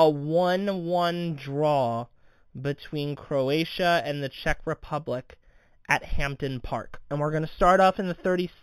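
Throughout the speech, imaging from linear upsampling is audible. The top of the band sounds consistent with an 8 kHz source raised to 44.1 kHz by straight-line interpolation. A faint mirrored copy sits around 25 dB down between 4 kHz and 8 kHz, giving sibilants a thin metallic shimmer. On a spectrogram it shows as a dim reflection of the speech above 4 kHz.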